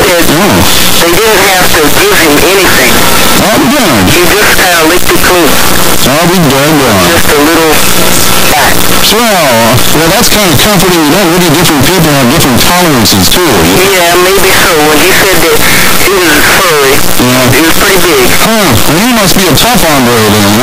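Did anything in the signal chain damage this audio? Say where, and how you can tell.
Yes. Signed and unsigned mixed up, throughout: quiet passages blare as harsh distortion, likely a sample-format conversion flipping the 8-bit top bit, so zero crossings jump full-range.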